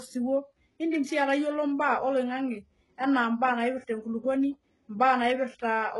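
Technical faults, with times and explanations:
Throughout, HE-AAC compression: the treble is grainy and unnatural, with s sounds turning gritty and lispy and the top end giving way to silence above about 11.5 kHz. This is likely spectral band replication, where only the lower spectrum is actually coded and the upper bands are copied up from below under a coarse envelope, so their harmonics misalign. The heavy damage points to a very low bitrate, near 12 kbps.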